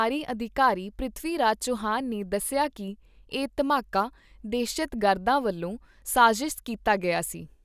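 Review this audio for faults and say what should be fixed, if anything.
Nothing needs fixing; no faults can be heard.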